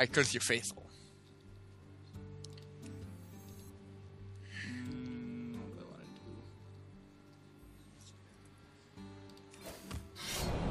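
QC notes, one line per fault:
No faults heard anywhere in this recording.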